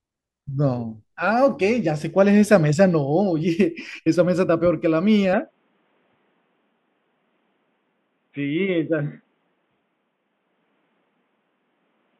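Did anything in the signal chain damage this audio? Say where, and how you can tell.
Yes. At the capture stage, from 5.33 s to the end, the speech turns dull and boxy. A spectrogram shows everything above 3.8 kHz cut off, with no gap or level step in the waveform, and a faint new noise floor about 50 dB down. The input was likely switched to a poorer device.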